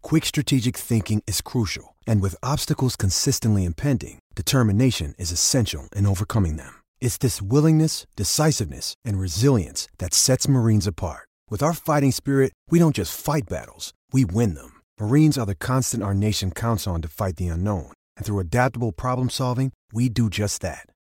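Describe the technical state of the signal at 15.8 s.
At 15.8 s the speech signal is intact, with no audible fault present at that moment.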